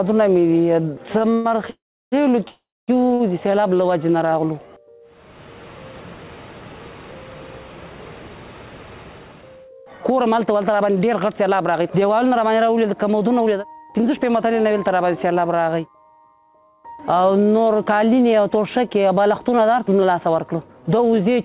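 From 1.18 to 1.52 s come repeated stalls (stutter): three brief holds, the longest 114 ms, together about 145 ms of stretched sound filling nearly half that span. Packets kept arriving late, so the jitter buffer drained repeatedly. Unlike a single freeze, the sound catches several times in quick succession, and nothing is lost.

Two longer breaks follow, at 1.70 to 2.14 s and at 2.48 to 2.90 s. Each is a call audio freeze: the last sound trails off into a fading buzz, then about 330 ms and 230 ms of silence before the audio resumes exactly where it stopped, pushed about 420 ms and 400 ms later. The likely cause is packets held up in transit until the buffer ran dry. The dead silence inside a single gap separates these from the stutter.

At 3.14 to 3.22 s a short stall from a late packet holds the sound for 58 ms with a faint buzz before it continues. It is one brief stretch with no silence, far shorter than the freezes.

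From 8.90 to 14.44 s, and again from 17.23 to 21.43 s, a jitter buffer speed-up makes the audio run about 8% and then 11% fast. Each time, about half a second is trimmed in small pitch-period slices to shrink a backlog. The pitch stays put, so it sounds hurried rather than higher. This sets it apart from a plain playback-rate error.

Throughout, nothing above 4 kHz comes through, which fits the G.711 mu-law call path.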